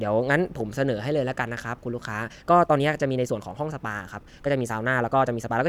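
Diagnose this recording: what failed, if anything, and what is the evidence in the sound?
From 2.23 s to the end, speech runs 1.35 times faster, rushed, at unchanged pitch. This time-stretched section likely comes from software dropping short pieces.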